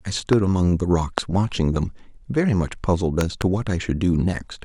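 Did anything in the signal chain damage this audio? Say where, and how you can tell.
Yes, four loud pops ride on the speech: single ones at 0.33 s and 1.18 s, then a double pop from 3.21 to 3.44 s, all well above the speech level. The speech runs on underneath, pointing to likely voltage spikes in the analogue wiring.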